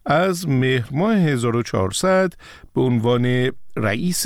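At 3.18 s the speech gains a single low thump, and the cause is a DC step: the waveform's zero line suddenly shifts to a new resting level, about -32 dBFS off centre, and holds there to the end of the clip. The step itself makes the thump, while the speech carries on unchanged over the displaced baseline. A click from a dropout or splice would come with a gap or jump in the sound itself. Here the sound runs on intact.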